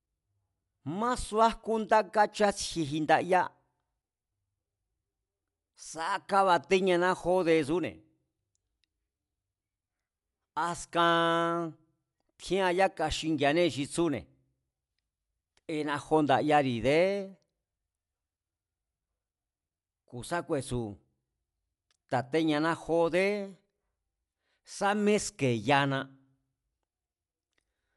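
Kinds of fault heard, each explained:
Dolby Digital compression: likely a bit-starved AC-3 encode, fitting about 64 kbps, that cuts everything above 11.4 kHz and noise-fills bare lines, leaving the speech dull and rough.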